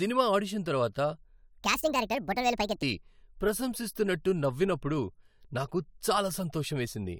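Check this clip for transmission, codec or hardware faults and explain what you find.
Two faults are audible in this speech clip: one section at the wrong speed and one skip from overlap between stream segments.

Section at the wrong speed, 1.58 to 2.82 s, right after "ఆడిషన్ తర్వాత": the speech runs 1.58 times fast and jumps about seven semitones higher, likely from playback against a mismatched clock.

Overlap between stream segments, 5.84 s: overlapping segment timestamps cause about 18 milliseconds to be trimmed, leaving a brief skip. The position fits a boundary between 6-second segments.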